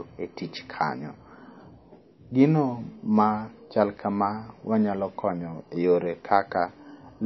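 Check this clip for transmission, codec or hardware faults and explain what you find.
There is one codec fault, present for the whole clip. Throughout, the speech lacks anything above 5.8 kHz, and consonants like s sound watery and swirly, which points to likely MP3 compression at a low bitrate of roughly 25 kbps. Short of bits, the encoder cuts the treble and drops weak frequency lines that flicker frame to frame. A spectrogram shows a hard ceiling at 5.8 kHz with speckled gaps below it.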